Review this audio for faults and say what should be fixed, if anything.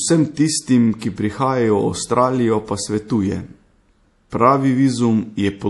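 Throughout the speech there is plainly audible codec damage: nothing remains above 11.5 kHz, and the sound has a watery, swirling quality with smeared consonant attacks. This is likely MP3 compression at a low bitrate, around 48 kbps. Short of bits, the encoder cut the treble at a fixed point and dropped weak frequency lines that flicker between frames. A spectrogram would show a hard ceiling at 11.5 kHz with patchy, blinking holes below it. Encoding from the original at a higher bitrate or with a more efficient codec would prevent this.

From 4.30 to 4.32 s there is pre-echo: a short hiss about 20 ms long leads into a sharp attack, which sounds softened. The codec spread quantisation noise across its whole transform block, so the noise suited to the loud onset also fills the quiet moment just before it. On a waveform, low-level fuzz appears ahead of the transient. On a spectrogram, a broadband smear precedes the onset. 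Using a higher bitrate or an encoder with good block switching on transients would prevent it.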